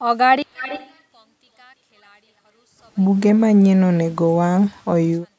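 One channel inverted, from 0.42 s to the end: the speech drops by about 30 dB and turns faint, because one stereo channel likely has reversed polarity. When the channels are summed to mono, everything they share cancels and only their small difference remains.

An echo leak runs from 0.53 to 1.01 s. A delayed copy of the speech trails the original by 332 ms, roughly 15 dB quieter, likely because a loudspeaker's sound reached the far side's microphone and its echo canceller let part of it through.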